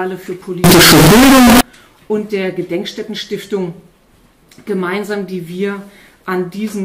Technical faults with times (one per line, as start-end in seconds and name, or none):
0.64-1.61 float read as integer